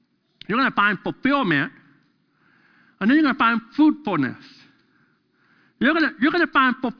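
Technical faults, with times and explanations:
No technical faults are present in this clip.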